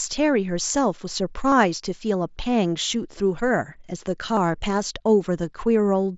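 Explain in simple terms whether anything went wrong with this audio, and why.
Three tiny hiccups interrupt the speech, from 1.50 to 1.52 s and at 3.18 and 4.36 s, each a brief buzzy smear lasting a few hundredths of a second. This is concealed Bluetooth headset packet loss: pieces of audio went missing between headset and phone, and the phone filled each gap by repeating a matching scrap of the sound just before it.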